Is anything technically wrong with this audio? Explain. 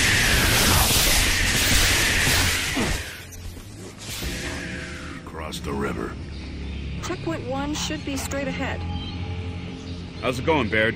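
Yes. From 2.36 to 3.31 s a slow ticking rides on the sound as it drops roughly 10 dB, and from 5.36 to 5.75 s a faster zipping accompanies a rise of about the same amount. This is zipper noise: the level moves in unsmoothed 2 dB steps, around seven per second and then around twenty per second, and each jump clicks.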